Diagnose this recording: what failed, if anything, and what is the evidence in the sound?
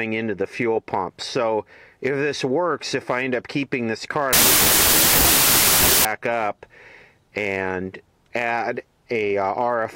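A sample-format conversion fault, a wrong sample width, hits the stretch from 4.33 to 6.05 s. Data written as packed 24-bit integers were read back as 16-bit integers, so every three-byte sample is split across two-byte reads. Many resulting values are built from mismatched bytes, which produces loud broadband noise with the real sound buried underneath. Because three bytes now yield one and a half samples, playback runs at 0.667 times speed, slower and lower in pitch by that ratio.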